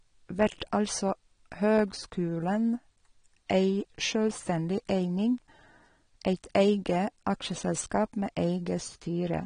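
The speech sounds dull from start to finish, with nothing above 9.7 kHz and a smeared, fizzy edge on sibilants, likely AAC compression at something like 32 kbps.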